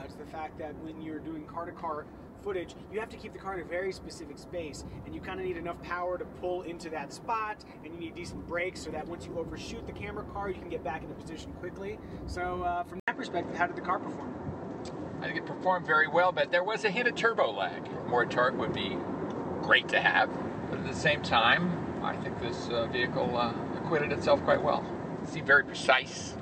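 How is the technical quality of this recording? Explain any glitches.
Quality drops partway through. At 13.00 s the sound cuts out for about 80 ms and comes back duller and boxier, with nothing above about 8.3 kHz, a shift in level of roughly 5 dB, and a new faint background noise about 45 dB below the signal. It stays that way to the end. The likely cause is an input switched to a poorer device mid-recording, which brings its own narrower bandwidth, tone, gain and noise.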